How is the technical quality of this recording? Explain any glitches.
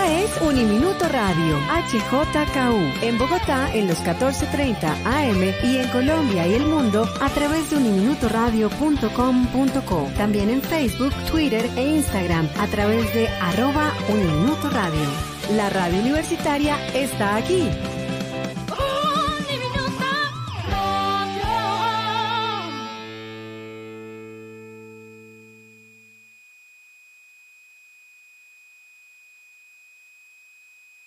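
The recording has one technical fault, present for the whole clip: a switching supply whistle. A switching power supply nearby, or in the recording chain, is running in an audible burst mode or beating against another supply. It leaks a high tone into the audio. That tone wanders between about 2.45 and 2.53 kHz as the supply's load shifts, sitting roughly 30 dB below the programme. It is heard as a thin whistle whose pitch drifts slightly under the sound.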